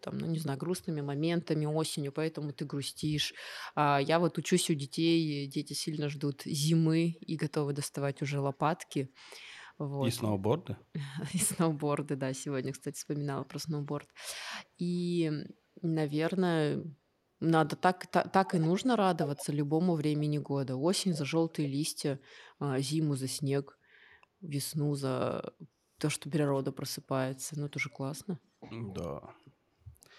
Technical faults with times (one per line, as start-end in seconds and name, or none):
5.83-7.20 echo leak
8.90-9.66 echo leak
13.43-15.52 echo leak
18.50-19.46 echo leak
21.12-21.52 echo leak
26.47-26.61 echo leak